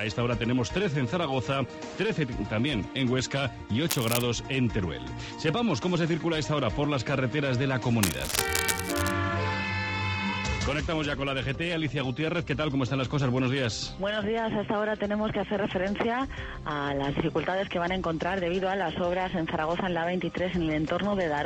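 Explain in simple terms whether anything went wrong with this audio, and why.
Something went wrong twice: a cable, plug or control was likely worn or loose and got moved, so its electrical contact kept flickering. That flickering adds cable scratch noise, rough bursts of scratching and rustling layered over the sound. It shows up briefly from 3.89 to 4.22 s, then for about a second from 8.03 to 9.12 s. Both times it is fairly loud, sitting only a little below the sound itself.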